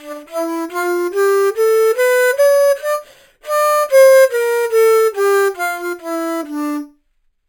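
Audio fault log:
Throughout, imaging from sample-and-hold upsampling: each original sample appears to have been held and repeated with no smoothing filter, so mirror copies of the spectrum sit above the real content. The lowest copy occupies roughly 5.5 to 11 kHz, which points to material first made at about 11 kHz and raised to 44.1 kHz. It rides at about 19 dB below the sound, adding a bright metallic fizz that tracks its level.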